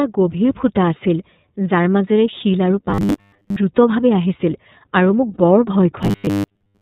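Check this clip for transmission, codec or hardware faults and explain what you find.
Three things are going on: a narrowband codec over the whole clip, two stretches of robotic buzzing, and one brief dropout.

The iLBC codec coloring runs start to finish and it's plainly audible. Nothing above 4 kHz survives, so the speech sounds boxed-in and telephone-like, with a slightly rough, synthetic edge. iLBC codes each frame's excitation independently at a low bitrate. The texture here fits its 13.33 kbps mode with 30 ms frames, which trades smoothness for robustness to loss.

The robotic sound from repeated short buffers hits twice, from 2.90 to 3.56 s right after "শিল আৰু", and again from 6.03 s to the end. The audio turns into a rigid metallic buzz pinned at 100 Hz that still loosely tracks the speech. The likely cause is audio arriving too slowly, so playback keeps re-using the last 10 ms chunk instead of fresh material. 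That chunk length fits the 100 Hz buzz. Most of the sound in those stretches is repeats rather than real signal.

The lost iLBC frames show up at 5.34 s as a gap of about 30 ms, which fits a single dropped frame. The decoder covers it by repeating the last pitch cycle with a bit of noise mixed in, so you hear a tiny held, buzzy vowel-like blip instead of silence. Because iLBC frames don't depend on each other, the speech snaps back right afterward.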